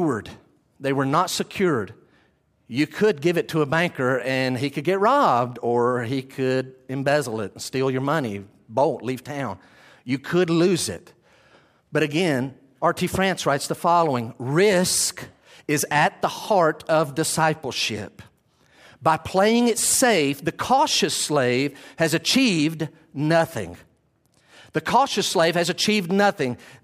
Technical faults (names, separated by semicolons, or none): none